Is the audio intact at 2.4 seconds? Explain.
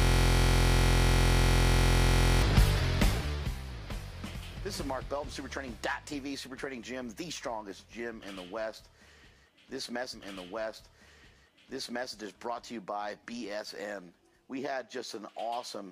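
No. At 2.4 s the audio is still caught in a system hang loop that runs from the very start of the clip, already under way at 0.00 s, until 2.42 s. The computer or its audio driver stalled while the sound hardware kept replaying the same ring buffer, so one 23.22 ms slice, which fits a 1024-sample buffer, repeats exactly, roughly a hundred times. At that length the repetition fuses into a steady buzz at about 43.1 Hz.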